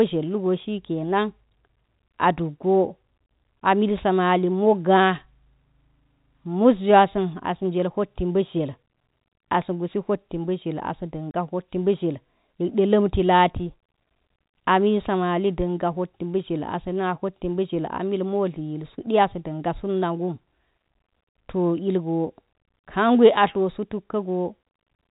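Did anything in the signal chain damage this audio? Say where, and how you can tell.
Yes. Packet loss filled with silence at the network stage, 11.31 to 11.34 s: the speech drops into a 30 ms hole with hard edges, which fits about three 10 ms packets going missing and the receiver playing silence in their place across the G.711 telephone-band stream.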